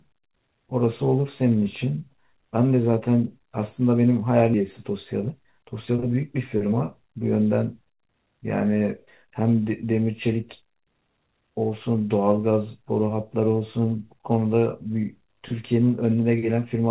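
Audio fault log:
4.54–4.56 s, skip ahead: about a second of speech vanishes and the two sides butt together with no fill, a clean jump rather than a silent dropout.
4.64–7.15 s, jitter buffer speed-up: speech runs about 108% fast as short pitch-period pieces are trimmed, roughly 0.2 s in total; pitch stays unchanged, unlike plain resampling.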